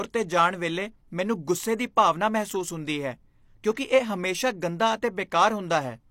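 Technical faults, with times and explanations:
3.74 to 3.77 s, pre-echo: the codec coded this stretch of speech in a transform block where a sharp attack arrives late, and it spread that block's quantisation noise evenly across its full length. Noise sized for the loud onset therefore also lands in the quiet gap just before it, so a short hiss rises about 24 ms ahead of the attack and the onset itself sounds blunted and smeared instead of crisp.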